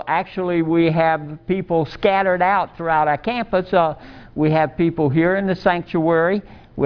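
Nothing stood out as a technical problem on listening to this audio.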